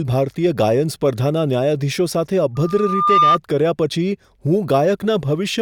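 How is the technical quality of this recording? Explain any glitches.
The recording has one clear fault. From 2.55 s to 3.38 s there is loudspeaker feedback squeal: a steady 1.2 kHz tone swells over most of a second until it sits a few decibels above the speech. The microphone is re-capturing its own loudspeaker, and at 1.2 kHz the loop gain exceeds unity, so that frequency keeps reinforcing itself until the loop is broken.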